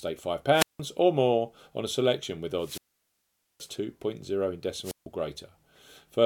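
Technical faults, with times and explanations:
0.52–0.80 s, 2.59–3.70 s, 4.83–5.06 s: wireless microphone squelch dropout. The radio link fades, hiss swells, then the receiver's squelch mutes the sound for 0.17, 0.82 and 0.15 s. The waveform shows a flat gap, and the spectrogram a broadband noise haze just before each blank.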